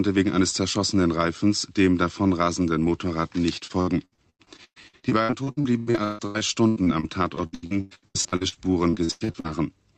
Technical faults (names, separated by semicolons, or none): repeated packet loss (robotic sound)